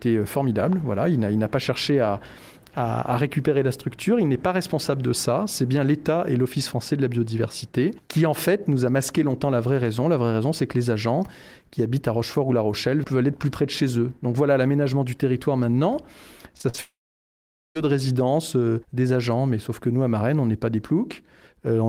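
Repeated packet loss (robotic sound) from 16.57 to 16.80 s: four short gaps, the longest 43 ms, are patched by repeating the last sound, so nearly half of the stretch comes out choppy. A long network dropout is the likely cause of what follows from 16.82 to 17.77 s, where a brief fading continuation gives way to about 0.83 s of silence before the audio resumes with that part missing.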